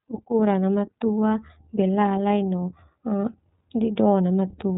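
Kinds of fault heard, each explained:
iLBC codec: narrowband speech coding in independent 30 ms frames, likely near 13.3 kbps; nothing above 3.8 kHz survives, leaving plainly audible rough, synthetic texture.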